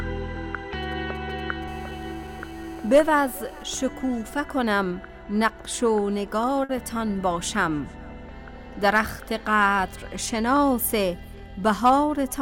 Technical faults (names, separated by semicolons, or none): GSM signalling bursts; GSM phone buzz; short stall from a late packet